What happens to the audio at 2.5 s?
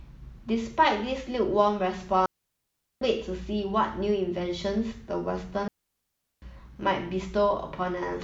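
At 2.5 s the speech drops into a clean hole of near silence from 2.26 to 3.02 s, with no crackle or noise burst on either side. This is a digital wireless dropout: the link lost too much data, so the receiver muted for about 0.76 s with a very short fade.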